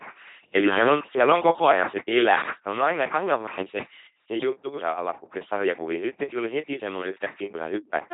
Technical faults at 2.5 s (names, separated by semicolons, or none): LPC-10 vocoder